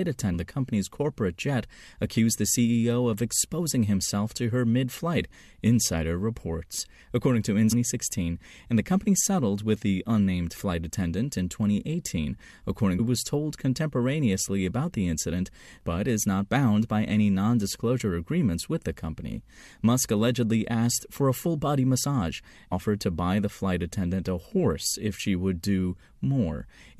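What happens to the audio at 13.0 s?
A very short glitch, a chirp, squawk, click or brief hole, cuts into the speech at 12.98 s, just before "was told contemporaneously about". This is damaged data in a compressed stream. Part of the encoded audio was corrupted, so the decoder misread or rejected the frame there, lost its place in the stream and had to hunt for the next valid frame header before decoding cleanly again. The glitch lasts under 20 ms.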